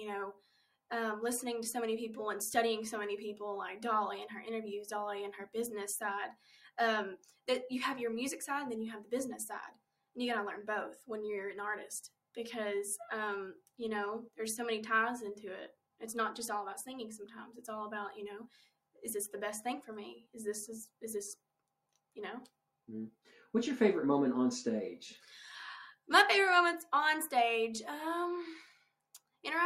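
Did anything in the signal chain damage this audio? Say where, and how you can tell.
Yes: a speech noise suppressor in the call processing was left on, treating music or sounds as noise. Held sound pumps by a few decibels, and the waveform envelope breathes throughout.

Sound cut by the noise suppressor at 0.33–0.91, 5.46–7.48, 9.04–10.16, 13.6–14.38, 15.72–16.01, 18.47–19.03, 20.2–23.53 and 28.74–29.44 s. Sustained sound drops by up to about 17–19 dB there and darkens on the spectrogram, while attacks mostly come through.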